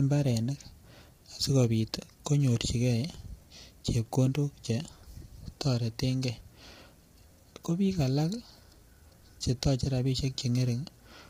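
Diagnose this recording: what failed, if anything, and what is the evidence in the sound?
The speech sounds rough and grainy from start to finish, with hiss filling the gaps between voice harmonics and a thin, synthetic top band. This points to the codec stage, likely low-delay AAC compression: its short frames resolve pitch poorly and, at a starved bitrate around 24 kbps, leave heavy damage.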